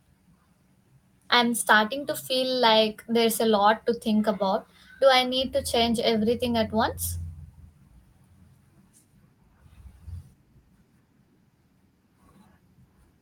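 On listening, nothing in the recording stood out as a technical problem.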